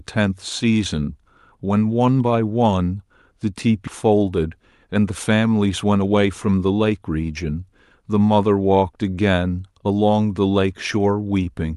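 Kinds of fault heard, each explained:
Skip ahead: at 3.87 s roughly 0.4 s of speech is dropped and playback joins the two sides directly, with no fill. The waveform shows unrelated stretches butted together; spectrogram harmonics break off and restart abruptly.
Jitter buffer speed-up: to shrink an overfull buffer, the receiver repeatedly cuts short pitch-period pieces, so speech runs about 7% fast from 4.43 to 5.11 s and 10% fast from 5.85 to 7.10 s at unchanged pitch. Spectrogram harmonic spacing holds while syllables compress in time.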